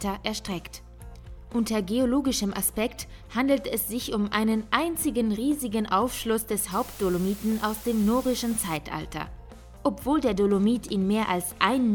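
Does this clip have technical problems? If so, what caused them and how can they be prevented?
Yes. From 6.71 s to 8.77 s the audio drops to low bit depth with dither: it is quantised to 7 bits, and dither converts the rounding error into a steady, even hiss roughly 15 dB below the signal, with no distortion. Prevent it by keeping 16 bits or more throughout processing.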